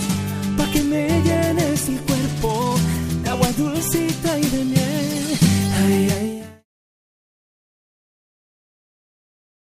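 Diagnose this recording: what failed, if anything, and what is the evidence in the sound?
Nothing has failed in the signal chain: a smooth fade-out begins at around 6 s and reaches silence at 6.66 s, tapering gradually without any click or hard edge, as a deliberate editing choice would.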